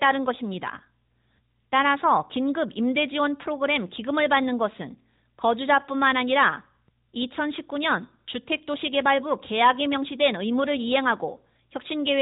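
From start to finish the speech sounds muffled, buzzy and synthetic, with nothing above 3.8 kHz: an AMR narrowband mobile codec, its damage consistent with roughly 10.2 kbps.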